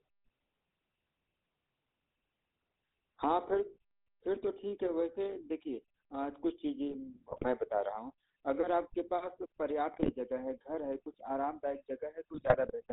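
Throughout, the speech has the sound of the GSM full-rate codec, which fits a 13 kbps stream. A vocal-tract model driven by sparse pulses makes it buzzy and gravelly. Nothing passes above 4 kHz.

GSM bit errors strike at 7.31 to 7.45 s, 9.94 to 10.12 s and 12.34 to 12.72 s. Corrupted filter, pitch and gain values warp the spectrum and level. The sound squawks, pops and gargles.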